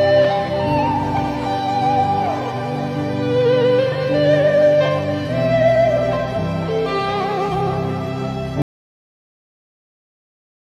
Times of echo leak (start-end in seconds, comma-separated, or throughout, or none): none